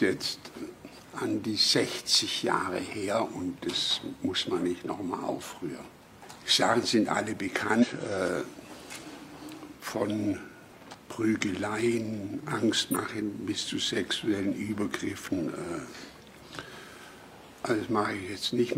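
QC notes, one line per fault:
0.53–0.58 s, 7.79–7.85 s, 8.98–9.03 s, 10.90–10.96 s and 12.91–12.96 s: compressed frames skipped. At each point the audio jumps forward, losing roughly a tenth to a fifth of a second: a few frames at 0.53 s and 8.98 s, a couple at 10.90 s and 12.91 s, and about five at 7.79 s. The jump sizes fit a frame of about 43 ms.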